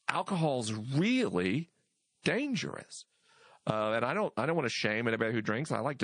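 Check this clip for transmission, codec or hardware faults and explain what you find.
Two codec faults are audible in this speech recording.

Throughout, the speech sounds watery and swirly, with dull treble and metallic chirping on s sounds. That is likely MP3 compression at a low bitrate, around 40 kbps: the encoder cuts the top end and drops weak frequency lines that flicker between frames.

From 2.22 to 2.25 s, just after "alcohol's really", a brief hiss about 17 dB above the surrounding level runs for 30 ms ahead of an attack, which then sounds smeared. This is pre-echo. The coding noise for the loud onset is spread across the whole roughly 52 ms block, so it fills the quiet moment before the onset. The length of that spread points to the encoder staying on long blocks here rather than switching to short ones.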